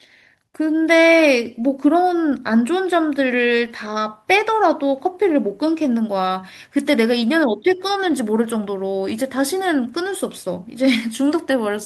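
No technical faults can be heard anywhere in the recording.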